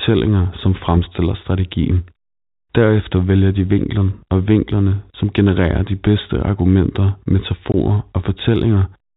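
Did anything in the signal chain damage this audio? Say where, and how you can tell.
Yes, at the network stage. There is packet loss filled with silence at 7.72 to 7.74 s. The speech drops out for 20 ms, which fits one lost packet. The gap is silence with hard edges. Nothing was rebuilt in its place. The receiver just played silence where the missing audio should be. Behind it the G.711 telephone band still holds, with nothing above 4 kHz.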